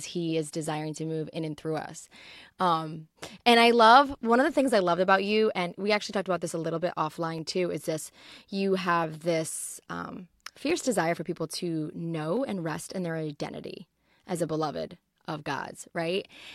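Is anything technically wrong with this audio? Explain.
Yes. From 0.75 s, just after "he is", to 15.69 s, about ten clock drift buffer slips recur every 1.66 s as clicks in the speech. These are likely caused by two devices' clocks differing by around 200 parts per million, so a buffer between them keeps drifting until a block of roughly 15 samples is dropped or repeated. Random dropouts or glitches would land at scattered times, but these ticks keep a steady beat.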